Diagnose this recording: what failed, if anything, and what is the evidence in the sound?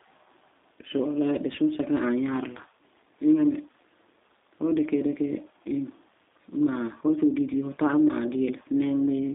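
G.729 codec, throughout, at the codec stage: the speech is confined to roughly 250 Hz to 3.7 kHz and sounds plainly rough and synthetic. The encoder rebuilds each 10 ms frame from a vocal tract filter, a pitch predictor and a few pulses, which fits an 8 kbit/s G.729A link.

VoIP packet loss concealed by the speech codec, 5.34 to 5.37 s, at the network stage: the speech briefly smears into a buzzy tone or coloured noise that fades, which points to a single lost 10 ms frame. The decoder extrapolated from its last pitch and filter at falling gain, and the damage carried into the following frames.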